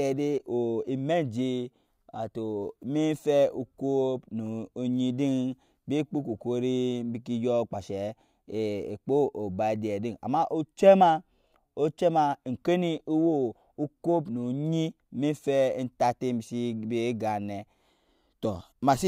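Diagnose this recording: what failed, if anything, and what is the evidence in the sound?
Nothing in the speech stood out as a fault on listening, so there is no failed stage to point to and no evidence to report.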